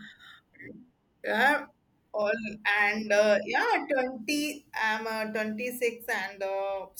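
At 2.22 s, just before "and uh yeah", there is a repeated buffer: fresh audio arrived late, so playback sent the previous 5 ms block out once more. The hard join at the repeat is heard as a brief click, with essentially no audio lost.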